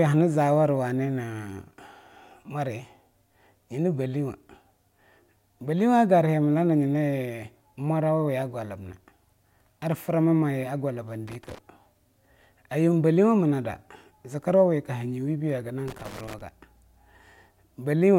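From 11.28 to 11.58 s and again from 15.88 to 16.41 s, the speech breaks into irregular scratching. This is loose connector crackle: a worn contact making and breaking.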